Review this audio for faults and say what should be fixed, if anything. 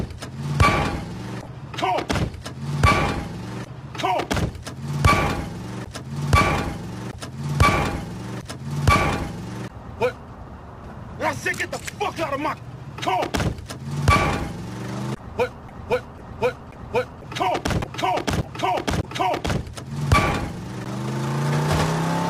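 For the first 4 seconds, 0.0 to 4.0 s, the treble sounds thin and synthetic with stronger codec artefacts, then quality jumps cleanly with no gap. This is an adaptive stream starting at a low bitrate: the opening sounds like HE-AAC near 24 kbit/s, stepping up to what fits AAC-LC at 96 kbit/s once the connection was measured. To prevent it, start playback on a higher rendition or deliver this clip at a fixed adequate bitrate.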